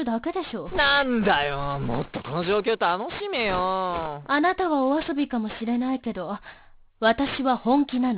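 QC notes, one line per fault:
throughout, aliasing: sibilant energy folds back below 4 kHz into gritty, unrelated tones roughly 15 dB down, fitting an unfiltered drop to 8 kHz; harsh rather than merely dull.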